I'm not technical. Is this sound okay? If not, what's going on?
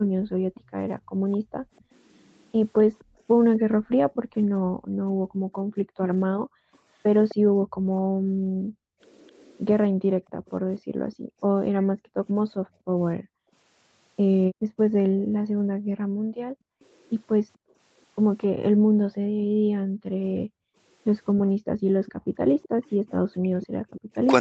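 No. Three things go wrong, all tied to the echo canceller, the part of a call system that stops the other person's loudspeaker sound from coming back to them.

Background gated by the echo canceller: the echo canceller keeps turning the microphone down hard whenever it thinks the loudspeaker is playing. From the start to 24.12 s, for roughly 15 seconds in total, the quiet room sound behind the speech dips sharply or vanishes, then comes back. The background seems to switch on and off rather than staying steady.

Echo leak: this is likely a far end playing the call on a loudspeaker, where the echo canceller failed to remove everything its microphone caught and sent the rest back. You hear a delayed copy of the speech trailing 258 ms behind, from 0.54 to 4.15 s (faint), 5.85 to 7.35 s (the clearest), 10.46 to 11.85 s (barely there) and 22.06 to 24.01 s (fairly noticeable).

Speech suppressed in double talk: near the end, both sides were likely talking at once, and the echo canceller couldn't tell the talker apart from the loudspeaker echo, so it pushed everything down. 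From 23.43 s to the end the voice dips, very sharply at its deepest.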